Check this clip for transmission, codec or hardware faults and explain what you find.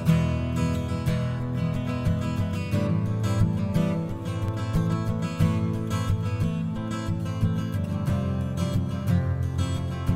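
One fault is present: CD scratch ticks. From 4.28 to 5.30 s there are six regular ticks, about six per second, the longest about 4 ms. A disc blemish spoils more data on each rotation than error correction can rebuild, so the player briefly fills or mutes those samples.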